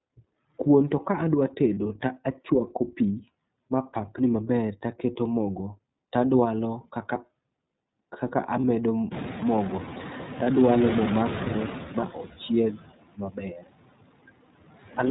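From start to finish the noise suppressor artifacts are there: it pulls steady noise down by about 20 dB, so the background dips between phrases. The whole thing also runs through the iLBC codec in its 30 ms frame mode, and its damage is plainly audible. Nothing above 4 kHz gets through, and the speech has a rough, slightly synthetic edge.

At 1.74 s, 8.60 s and 10.44 s there are lost iLBC frames, each about 30 ms. The decoder fills each gap with a short buzzy held sound, and the speech snaps back right after.

Around 9 s the room noise jumps by about 24 dB. From 9.11 to 11.84 s you hear the noise suppressor catching up: the noise comes through only about 6 dB lower at first, then sinks over roughly 2.7 s as the suppressor adapts.

From 13.14 to 13.68 s there's speech cut by the noise suppressor. It mistakes about half a second of speech for noise and pulls it down by up to about 21 dB, so that stretch sounds swallowed and faint.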